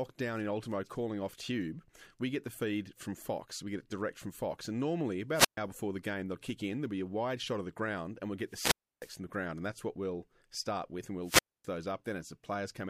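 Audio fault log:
5.32–11.68 s, wireless microphone squelch dropouts at 5.32, 8.48 and 11.23 s. The radio signal fades and the receiver mutes. A hiss rise, then silence of 129, 307 and 259 ms.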